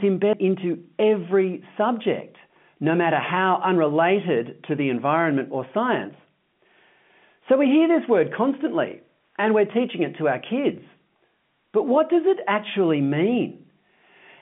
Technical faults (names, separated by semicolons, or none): CD skip